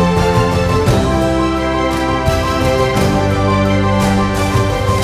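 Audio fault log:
No fault is found in this audio.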